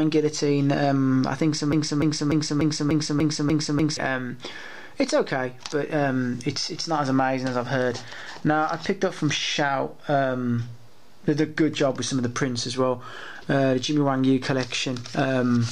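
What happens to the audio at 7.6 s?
Nothing goes wrong at 7.6 s; the audio plays through that moment intact, with no dropout, click or distortion.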